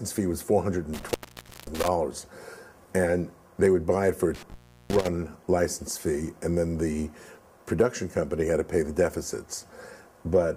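Intermittent contact interrupts the sound twice, from 0.94 to 1.88 s and from 4.34 to 5.08 s, as a loose plug or cable briefly opens for about 0.53 s and 0.36 s. On a waveform these appear as flat, near-silent gaps with crackle spikes at their edges.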